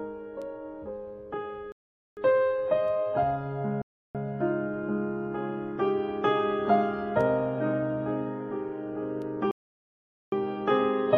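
Bluetooth stalls at 1.72 to 2.17 s, 3.82 to 4.15 s and 9.51 to 10.32 s cut the sound to dead silence for 0.45 s, 0.33 s and 0.81 s, after which it resumes. The likely cause is radio interference holding up the wireless packets, so the headphones' buffer ran empty and playback paused until retransmitted packets arrived. The third dropout is the longest.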